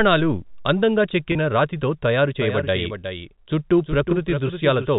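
At 1.32 to 1.35 s, just before "రాతితో తయారు", there is packet loss with pitch repetition. About 30 ms of audio went missing, which fits a single lost packet. The receiver filled the gap by looping the last pitch period instead of leaving silence. Because the gap is this short, the concealment never has time to fade out. The result is a brief held, slightly buzzy tone before the speech resumes with a quick cross-fade.

From 2.41 s, right after "రాతితో తయారు", a doubled audio track appears and runs to the end of the clip. A second full-band copy of the speech trails the original by roughly 400 ms, at about 10 dB lower level. It is a clean, dry repeat with no decay or room colouring, and it switches on abruptly. The likely cause is the same signal being captured again through a slower path and mixed back in. Underneath, the telephone band limit at 4 kHz from the G.711 coding stays in place on both copies.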